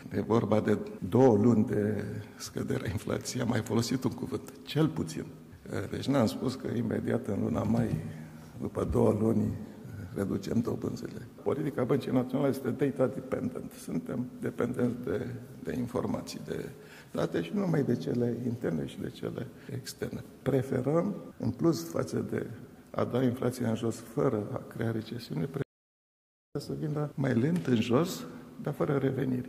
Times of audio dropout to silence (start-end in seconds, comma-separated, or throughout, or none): 25.62-26.55